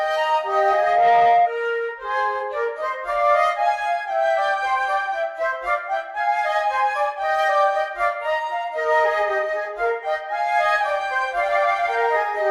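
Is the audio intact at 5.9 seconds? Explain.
Yes, at 5.9 seconds the audio runs intact, with no dropout, click, distortion or other fault at that point.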